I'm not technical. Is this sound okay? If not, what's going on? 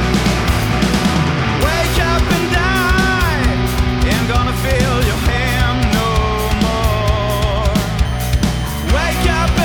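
No. From 8.05 s to the end there's a switching supply whistle, a faint high whine near 3 kHz, wavering slightly, unlike steady low mains hum.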